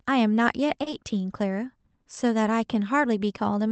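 Speech over a call link whose spectrogram ends near 8 kHz has two adjacent glitches. From 0.83 to 0.88 s there is a short stall from a late packet: the jitter buffer ran dry, and about 30 ms of the last sound was stretched before playback resumed with nothing lost, showing as a smeared, flattened band on the spectrogram. From 0.90 to 0.94 s, short concealed packet loss replaced about 20 ms of missing audio with an extrapolated continuation, which appears as a brief blurred patch.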